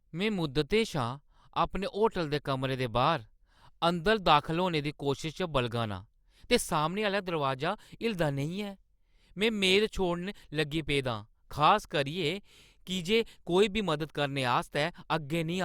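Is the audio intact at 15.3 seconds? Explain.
Yes, at 15.3 seconds the speech is intact, with no dropout, click, distortion or other fault at that moment.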